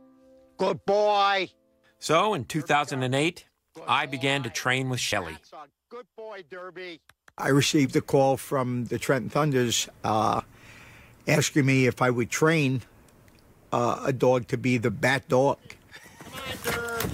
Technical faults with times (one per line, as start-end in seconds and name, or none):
2.05 damaged data in a compressed stream
5.11 damaged data in a compressed stream
7.85-7.87 damaged data in a compressed stream
10.38 damaged data in a compressed stream
14.89 damaged data in a compressed stream